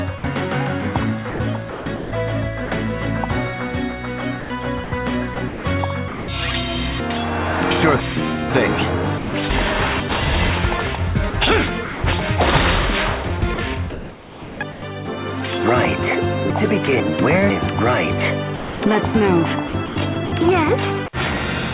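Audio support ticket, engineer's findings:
Sound dropped by the voice detector at 0.18–0.24 s (60 ms), 9.18–9.34 s (160 ms) and 18.56–18.82 s (260 ms). Sound cuts to steady synthetic hiss, then resumes. Likely the sender's VAD classing low-level content as background and stopping transmission; the receiver filled each gap with comfort noise.

Sound chopped by the voice detector at 1.3–2.7 s, 4.4–6.28 s, 11.3–12.04 s, 13.28–14.82 s and 19.68–21.08 s. Repeated on/off gating, with roughly 240 to 880 ms per stretch replaced by comfort noise. Soft edges are clipped away. Likely the same VAD toggling rapidly around its threshold.

Chunks out of order at 7.0–8.5 s, 9.5–10.5 s and 16.5–17.5 s. Half-second blocks play late: two blocks behind at 7.0 s and one behind at the other two. The result is a jumbled passage with three hard joins, but no content is missing. This points to jitter buffer or write-side reordering. 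The band limit at 4 kHz through the call path fits G.711 A-law at 64 kbps.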